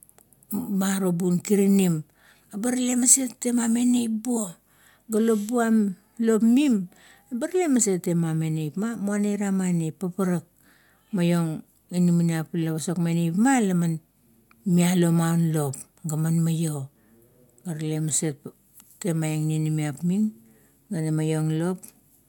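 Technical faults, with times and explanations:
Nothing technical stands out in this speech recording; it all sounds as it should.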